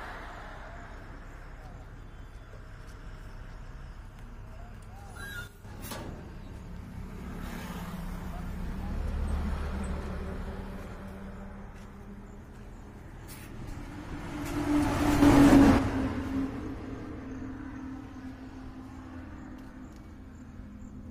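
At 5.47 s the level abruptly falls by about 7 dB and stays low until 5.65 s; at 15.22 s it leaps up by about 6 dB until 15.79 s. Both are sudden gain jumps: the sound and its background noise shift together, with no fade, likely from a gain setting applied without a ramp. On the waveform the envelope steps down or up at a hard vertical edge, and the spectrogram shows every band darkening or brightening at once.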